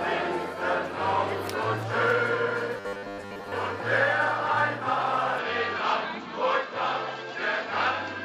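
Robotic sound from repeated short buffers runs from 2.77 to 3.52 s. The sound turns into a rigid, metallic buzz at 100 Hz. This is likely caused by audio arriving too seldom, with the gaps filled by repeating about 10 ms of audio, covering most of this stretch.

Input switched to a poorer device at 5.38 s, lasting to the end. The likely cause is a change of capture device with no gap and no jump in level. A narrower band passes, so the sound turns duller, and a new noise floor sits about 30 dB below the signal.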